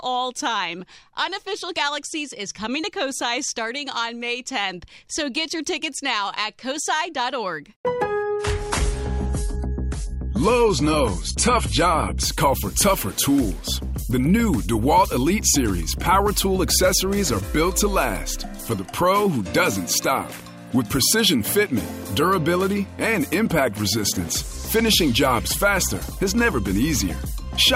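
The audio drops abruptly in quality from 8.23 to 12.23 s, with no gap on either side. Nothing is left above 11.5 kHz, and codec artefacts thicken. This is an adaptive stream at a lower bitrate, consistent with a switch from 96 to 32 kbit/s AAC.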